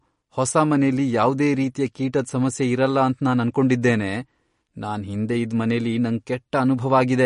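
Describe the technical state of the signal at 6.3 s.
At 6.3 s the speech shows MP3 compression, which runs through the whole clip: nothing above 10.5 kHz, plus watery, swirling sibilants. Unlike a plain low-pass filter, weak frequency lines flicker on and off between frames, likely from a starved encoder, fitting roughly 40 kbps.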